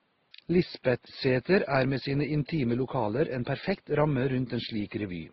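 From start to end the speech carries two layers of coding damage, heard together. The cause is likely transcoding between lossy codecs. The sound fits MP3 at 24 kbit/s followed by Opus at 16 kbit/s. The second codec spends its scarce bits re-encoding the first codec's smearing and adds its own coarseness. Top end stays capped at the lower cut-off. Faint room noise, about 44 dB below the speech, sits underneath.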